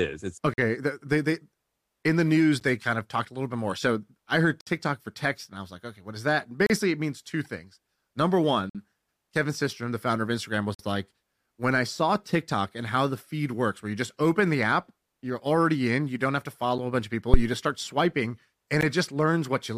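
Speech interrupted by hard-edged holes of silence, roughly every two seconds, at 0.54–0.58, 2.6, 4.61–4.67, 6.66–6.70, 8.70–8.75, 10.74–10.79, 16.78 and 18.81 s, the longest about 59 ms. These are gaps between stream segments. Their timestamps leave small spaces that the player fills with silence, and the spacing fits 2-second segments. A deep thump at 17.34–17.45 s, decaying over about 25 ms, is a phantom power thump, where a supply switching on a live input sends a voltage step through the coupling capacitors.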